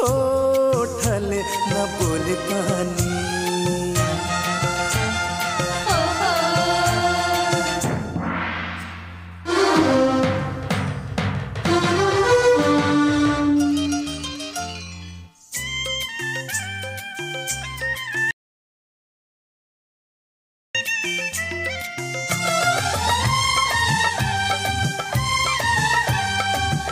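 From 18.31 to 20.75 s the input was likely lost while recording continued, an audio dropout to silence leaving 2.4 s of dead, toneless silence.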